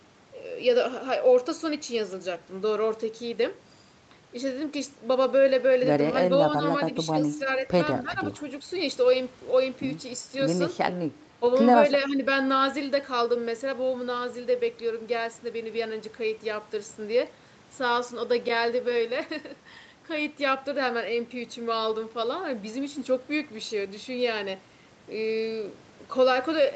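The speech dips briefly from 8.02 to 8.18 s, more sharply from 11.4 to 11.44 s (around 10 dB), and again from 12.08 to 12.23 s, by a few decibels. This is likely speech suppressed in double talk: the echo canceller mistook overlapping far-end sound for echo and attenuated the talker too.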